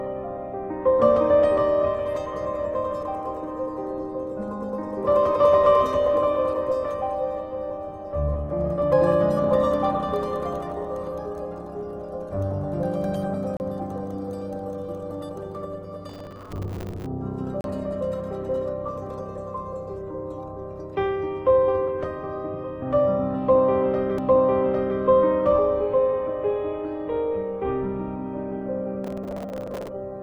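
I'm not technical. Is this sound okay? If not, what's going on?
No. Two kinds of fault can be heard.

CD skip: the player's laser loses its place on the disc's spiral track and lands on a neighbouring turn. The player goes quiet for an instant, then carries on from a slightly different spot. You hear a small tick and the sound suddenly jumping ahead or back, at 13.57, 17.61 and 24.18 seconds. The first two have a brief silence of a few hundredths of a second; the last gap is far shorter.

Processor overload crackle: the computer handling the sound gets too busy to prepare each tiny slice of audio in time, and it misses dozens of these deadlines in a row. Each time it falls behind, it replays a scrap of sound it already had, with sharp edges. Those many small repeats blur into a gritty, tearing crackle over the sound from 16.09 to 17.06 seconds and again from 29.04 to 29.89 seconds.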